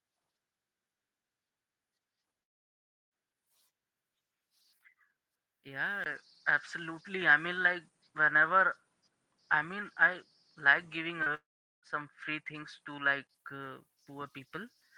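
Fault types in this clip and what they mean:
Long network dropout: The sound cuts out from 2.43 to 3.14 s and again from 11.34 to 11.86 s. About 0.68 s and 0.48 s of audio are lost. Each gap is mostly silence and likely comes from a stalled network stream. The audio resumes without the missing part.
Input switched to a poorer device: At 6.04 s, after a 20 ms silence, the sound turns duller. Nothing remains above 9.8 kHz, the level shifts by a few decibels, and a faint new noise floor appears. The original tone returns at 13.29 s, likely after a change of microphone.
Short concealed packet loss: From 11.23 to 11.29 s, about 40 ms of audio never arrived. The receiver stretched the preceding sound to fill the hole and then blended back. The result is a brief smear just before the second dropout.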